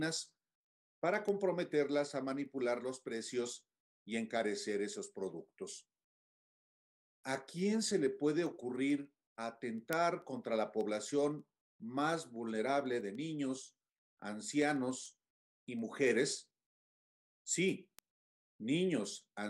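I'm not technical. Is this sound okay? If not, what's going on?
No. From about 0.11 s to 19.45 s there are word clock ticks: sharp clicks, roughly six or seven a second, that vary in strength. Two digital devices run on unsynchronised clocks about 150 parts per million apart. Their steady rhythm sets them apart from random crackle.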